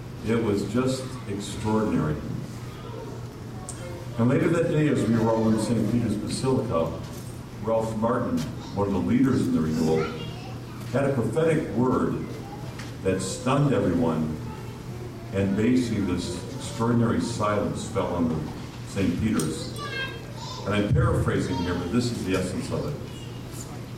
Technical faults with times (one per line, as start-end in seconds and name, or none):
none